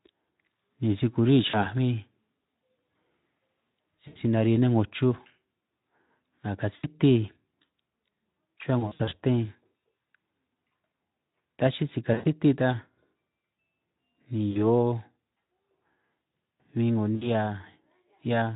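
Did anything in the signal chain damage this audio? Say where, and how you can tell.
Yes, on the network side, there's VoIP packet loss concealed by the speech codec. Short gaps at 1.49, 4.08, 6.75, 12.13, 14.51 and 17.15 s, plus a scattered run from 8.80 to 9.14 s, get stretched into a fading buzz or coloured noise while the Speex decoder extrapolates its last pitch and filter.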